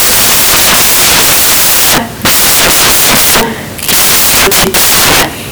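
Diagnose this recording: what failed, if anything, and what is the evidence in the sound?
What failed is the sample-format conversion: the samples are built from the wrong bytes across the whole speech clip. Instead of speech you get loud, harsh broadband noise, close to white on the loud parts. That's the tell: the reader has the byte order or alignment wrong, so the fast-flickering low bits end up as the big part of each value.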